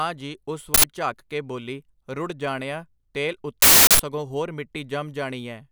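A playback buffer was sent out before any audio had been written into it, so whatever leftover memory it held was read as samples. This uninitialised buffer fault produces a loud burst of digital noise replacing the audio, first from 0.74 to 0.84 s (about 93 ms, which fits a 4096-sample buffer), then a longer burst from 3.62 to 3.99 s (about 372 ms, consistent with a 16384-sample buffer).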